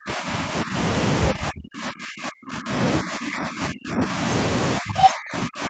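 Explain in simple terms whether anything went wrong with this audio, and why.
The call's echo canceller likely confused the talker with loudspeaker echo while both sides spoke at once, and turned the speech down. This is speech suppressed in double talk. The voice dips at 0 to 0.76, 3.01 to 4.24 s, and nearly vanishes at 1.33 to 2.75 and 4.78 s to the end.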